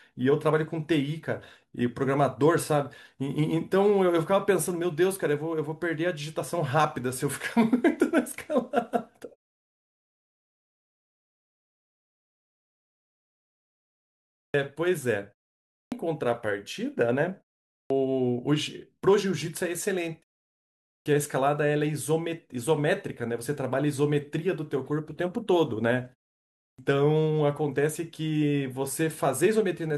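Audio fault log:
14.31 to 26.79 s (at 14.31, 15.71, 17.71, 20.84 and 26.58 s), clipped start after a pause: after each silence, from 5.04 s down to 0.36 s long, the output path is still waking and the first 190 to 230 ms of speech never arrives, so each phrase begins abruptly, missing its onset. On the waveform the envelope jumps straight from flat silence to full level. The spectrogram shows a hard vertical edge with no initial consonant energy.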